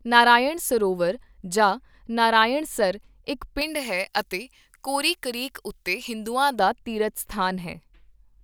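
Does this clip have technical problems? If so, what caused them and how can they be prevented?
Yes. From 3.61 to 6.59 s, pre-emphasis was left on. The speech turns thin, bright and sibilant. The treble boost, which fits a J.17 curve, sits about 11 dB high at 10 kHz with no matching de-emphasis. To prevent it, apply the matching de-emphasis filter on playback or decoding.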